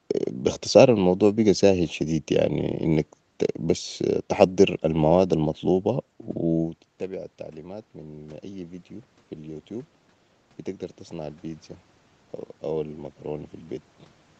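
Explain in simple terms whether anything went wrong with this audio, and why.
The automatic gain control, the part of the call system that evens out loudness, went wrong here. Around 6.5 seconds the talker moves away from the microphone and the speech drops sharply. From 6.98 to 8.91 seconds the gain control slowly turns itself up to compensate, so the voice and the room noise behind it swell together over about two seconds, just before "في البوتيوب". It only makes up a small part of the drop, so the speech stays noticeably quieter.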